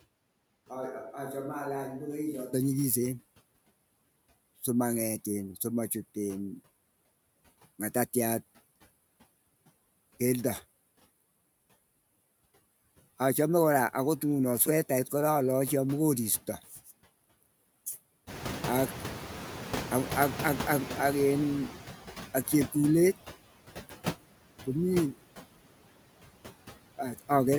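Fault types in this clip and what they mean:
noise suppressor artifacts: Throughout the clip the background noise drops away in the gaps between words and returns underneath the speech, so the floor seems to pump with the talking. This comes from a noise suppressor that estimates the steady noise and pulls down the frequency bands it judges to be noise, frame by frame, here cutting it by about 17 dB.
switch to a distant microphone: From the very start until about 2.5 s the speech sounds roomy and hollow, thinner in the low end and roughly 10 dB quieter than what follows, with the room noise sitting far below it. The change at the end of that stretch is abrupt. The likely cause is that the close microphone's signal was missing at first, so the recording was carried by a microphone farther from the talker before the close one took over.
noise suppressor catching up: Around 18.5 s the room noise jumps by about 17 dB, to roughly 12 dB below the speech. 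The rise itself is genuine background sound, but from 18.26 s to 21.89 s it comes through only partly reduced, with about 9 dB taken off, and then settles lower. The suppressor's noise estimate lags the sudden change and needs about 3.6 s to adapt before full reduction resumes.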